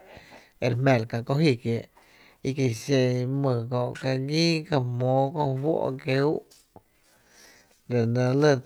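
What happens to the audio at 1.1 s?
Nothing goes wrong at 1.1 s: the speech runs on intact through that moment, with no dropout, click, distortion or other fault.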